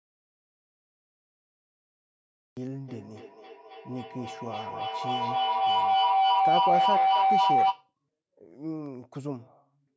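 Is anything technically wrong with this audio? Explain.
Yes, there are two faults. From the start to 2.57 s there is an audio dropout to silence: the input was likely lost, leaving a flat waveform with no room tone and a blank spectrogram. From 2.88 s to 7.95 s a feedback howl builds, a microphone-to-loudspeaker loop growing each trip into a tone near 700 Hz, pulsing about every 300 ms, peaking about 10 dB over the speech. It shows as a bright horizontal band below the 8 kHz ceiling from the call's microphone processing.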